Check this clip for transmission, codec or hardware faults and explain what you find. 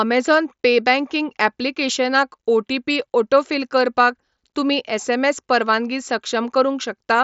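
Nothing stood out on listening to this speech clip.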